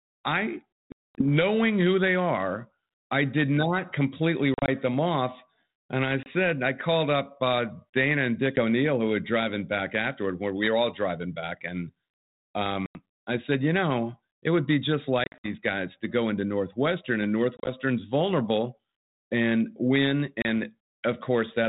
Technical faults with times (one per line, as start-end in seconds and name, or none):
0.92-1.32 packet loss on an ADPCM call
4.54-4.69 packet loss on an ADPCM call
6.23-6.27 packet loss on an ADPCM call
8.56-8.59 packet loss on an ADPCM call
12.86-12.99 packet loss on an ADPCM call
15.24-15.49 packet loss on an ADPCM call
17.57-17.69 packet loss on an ADPCM call
20.42-20.46 packet loss on an ADPCM call